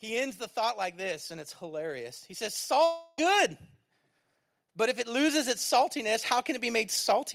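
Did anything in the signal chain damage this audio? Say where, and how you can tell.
Yes. The first fault is automatic gain rising, which happens in the call-processing stage. From 0.05 s to 3.56 s the speech and the background noise floor climb together by about 7 dB. That steady, shared swell shows a gain control that judged the input too quiet and turned itself up, rather than anything the talker did. A second slow rise begins at 4.74 s and runs to the end of the clip, so the control is still pushing level upward there.

The second fault is a long network dropout, most likely packet loss on the network path. Between 2.84 s and 3.19 s about 340 ms of audio never arrives. The receiver covers nearly all of that gap, roughly 334 ms, by extending the last sound into a fading buzz or hiss instead of leaving silence. When the speech resumes, the missing portion is simply gone, and the audio jumps ahead to where it would have been.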